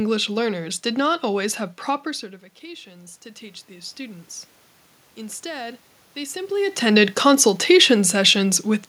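Automatic gain rising, 2.04–4.36 s: input fell about 17 dB, so the gain control slowly added about 6 dB, swelling voice and background together.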